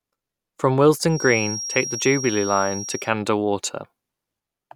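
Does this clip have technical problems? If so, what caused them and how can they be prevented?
Yes. Feedback whistle, 1.06 to 3.12 s: a thin 5.6 kHz tone at one pitch, slowly swelling and fading, roughly 10 dB below the speech, likely from a loudspeaker-to-microphone loop hovering at the edge of feedback. To prevent it, lower the monitor gain, move the microphone away from loudspeakers, or notch out 5.6 kHz.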